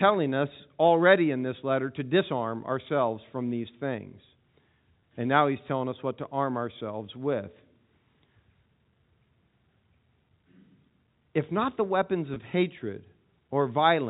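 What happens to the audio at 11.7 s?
At 11.7 s the speech carries on intact, with no dropout, click or distortion, just the narrow telephone band of the G.711 coding that runs through the clip.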